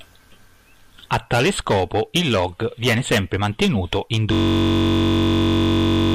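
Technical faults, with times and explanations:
4.33–6.14 s, system hang loop: Just after "viene sempre mantenuto in", the speech stops moving forward. One slice of about 21.3 ms repeats exactly until the clip ends. The computer or driver has frozen while the sound hardware keeps replaying its ring buffer. The loop length fits a 1024-sample buffer. Because the loop is so short, the repeats fuse into a steady buzz at about 46.9 Hz, the rate at which the same piece restarts.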